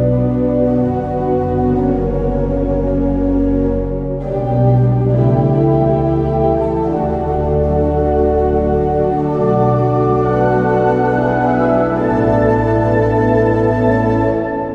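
No technical faults can be heard anywhere in this audio. There is nothing to place in time or to describe as having gone wrong.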